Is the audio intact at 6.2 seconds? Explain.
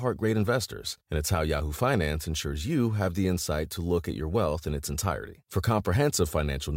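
Yes, the speech at 6.2 seconds is intact, with no dropout, click, distortion or other fault at that moment.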